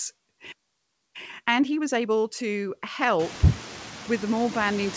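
Noise suppressor artifacts run through the whole clip. A frame-by-frame suppressor pulls down the bands it judges to be steady noise by about 13 dB, so the background dips in the gaps and comes back under the speech.

At 0.52 s the audio cuts out in a playback stall lasting about 0.62 s, to 1.16 s. The output drops to silence mid-flow, most likely because the player ran dry of buffered data or its audio thread was blocked, and then resumes.

From 1.16 s to 2.40 s comes a time-compressed catch-up: the player trims its backlog by dropping and cross-fading short slices. The speech runs at 1.5 times normal speed with pitch unchanged.

The room noise that rises by about 23 dB at around 3 s is part of the recording, and the band limit at 8 kHz is consistent with G.722 on the call path.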